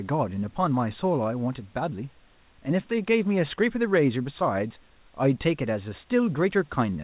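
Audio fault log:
The speech comes through a narrowband call path with nothing above 4 kHz, consistent with G.711 A-law at 64 kbps, and the room noise sits about 40 dB below the speech, with no fault anywhere in the signal.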